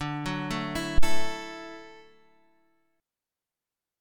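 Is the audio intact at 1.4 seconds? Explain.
No. A phantom power thump runs from 0.98 to 1.4 s. A supply switched on or off on a live input sent a voltage step through the coupling capacitors, producing a deep thump peaking at about -10 dBFS that decays over roughly 95 ms, its tail reaching 1.4 s.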